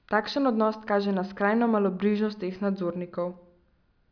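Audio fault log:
No faults can be heard anywhere in this speech.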